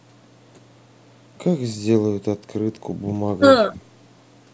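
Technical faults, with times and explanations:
Nothing here counts as a fault; the speech has simply gone through ordinary call microphone processing, which trims the deepest bass and leaves nothing above 8 kHz, and that's just how call audio sounds.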